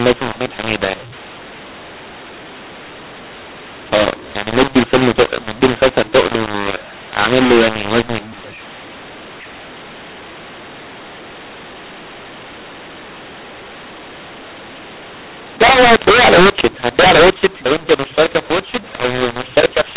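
Throughout the speech, mu-law and A-law are mixed up: A-law telephone samples decoded as mu-law scramble levels, giving harsh distortion and noise-filled pauses within the 4 kHz telephone band.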